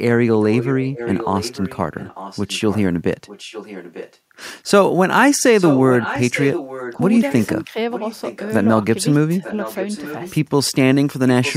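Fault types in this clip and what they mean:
Echo leak: a weaker copy of the speech returns 895 ms later, about 10 to 15 dB down, likely uncancelled loudspeaker pickup; spectrograms show faint, time-shifted duplicate harmonics.
Speech suppressed in double talk: speech briefly dips about 10 dB for roughly 100 ms, likely echo-canceller gating during overlapping talk; the waveform shows a short envelope notch.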